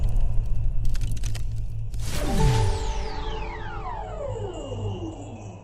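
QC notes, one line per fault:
3.11–5.63 s, adaptive stream at a lower bitrate: sudden gapless switch to a lower-bitrate version, consistent with Opus falling from 64 to 12 kbit/s; treble vanishes above 8.4 kHz and codec artefacts rise. Spectrogram shows a hard horizontal ceiling from 3.11 s; waveform stays unbroken.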